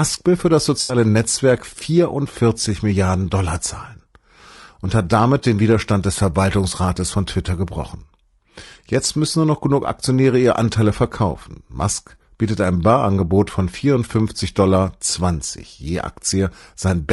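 Throughout, the voice sounds rough and grainy, with a hiss filling the gaps between harmonics and a thin, synthetic top band. This is likely low-delay AAC compression (AAC-ELD), whose short frames resolve pitch poorly, and the damage fits a low bitrate around 32 kbps.

From 0.81 to 0.95 s, right after "will für das", the sound turns briefly smeared and noisy, with a phasey wash in place of clear detail. This is AAC frame loss with concealment: about 80 ms of audio went missing, and the decoder rebuilt it from the last good spectrum.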